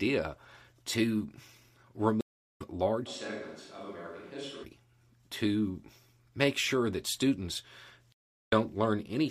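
At 2.21 s the speech cuts out for about 0.35 s in a stream reconnect: the connection dropped, the player fell silent, then started a fresh decoder mid-stream. When the sound returns at 2.61 s it picks up roughly a fifth of a second further on, so a sliver of speech is skipped, and it enters with a brief soft onset. On a waveform this is a flat-line gap ending in a short ramp; a spectrogram shows a clean vertical blank band.

From 3.08 s to 4.63 s the speech abruptly turns hollow and roomy, with thinner bass, a level drop of about 10 dB and a raised background bed sitting roughly 25 dB below the speech. This sounds like a switch to a distant microphone, likely because the close microphone's signal failed and a farther one took over. It then snaps back just as suddenly. The waveform shrinks to a narrower envelope for that stretch, and the spectrogram shows weaker low frequencies, smeared reverberant tails after each syllable, and a brighter noise floor filling the gaps between them.

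A second stream reconnect begins at 8.12 s, right after "make sure that students". Here the silence lasts about 0.38 s, and playback resumes at 8.53 s with little or nothing audibly skipped, again easing in rather than starting at full level. It appears as another flat gap in the waveform and an empty column on the spectrogram.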